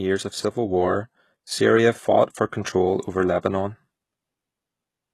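From start to finish the speech has a bright but synthetic top that stops dead at about 12.3 kHz, with sibilants sounding gritty and lispy. That points to likely HE-AAC compression at a bitrate near 16 kbps. Unlike a plain low-pass, the treble is rebuilt from copied lower bands whose harmonics fail to align.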